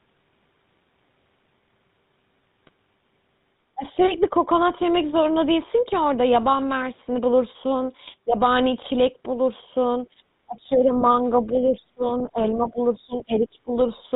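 Throughout, the speech has the buzzy, gravelly texture of the GSM full-rate codec, which fits 13 kbps coding: pulse-driven excitation and nothing above 4 kHz. GSM bit errors at 2.63 to 2.70 s, 8.06 to 8.14 s and 13.13 to 13.16 s corrupt decoder parameters, producing brief squawks and gargling pops. The talker's speech drops by roughly 15 to 25 dB at 3.75 to 3.83 s, 10.46 to 11.04 s, 11.52 to 12.03 s and 12.23 to 13.73 s, likely speech suppressed in double talk by an echo canceller. At 11.00 and 12.19 s, faint scraps about 20 to 25 dB down are heard, which are likely the other side's voice leaking through as residual loudspeaker echo.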